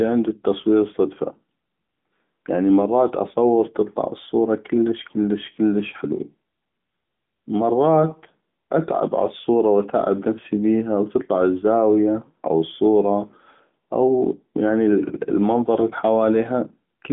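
A speech clip carrying AMR narrowband mobile codec damage throughout. The sound is confined to roughly 150 Hz to 3.5 kHz. Its buzzy, synthetic edge fits a mid-rate mode around 10.2 kbps.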